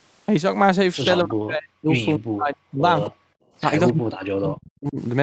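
A speech recording over a call link, heard through a band that stops at 8 kHz, in which the talker repeatedly sinks and cuts out. The voice drops by as much as about 40 dB from 1.24 to 1.92 s, 2.17 to 2.83 s, 3.08 to 3.27 s and 3.93 to 4.99 s, with a shallow dip of about 5 dB at 3.61 to 3.66 s. This is speech suppressed in double talk, likely caused by the far side speaking at the same moment: the echo canceller could not tell this talker apart from its loudspeaker echo and turned everything down together. Just before the long final dropout, at 3.88 to 3.93 s, a brief faint copy of the voice surfaces about 266 ms late and roughly 25 dB under the speech. That scrap is an echo leak, most plausibly residue from a loudspeaker that the canceller failed to remove fully and sent back down the line.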